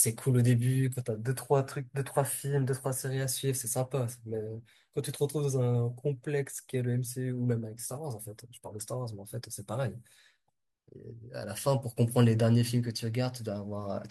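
Listening through this speech recording, nothing stood out as a technical problem anywhere in it.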